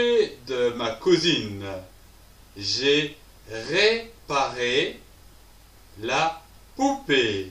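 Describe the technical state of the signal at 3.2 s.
The signal at 3.2 s is intact, with no fault audible at that moment.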